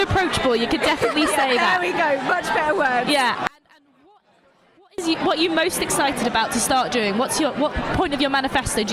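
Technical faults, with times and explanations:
3.47–4.98 s, one channel inverted: the sound nearly vanishes, down about 34 dB, likely because one side's polarity flipped and the shared content cancels in the mono sum.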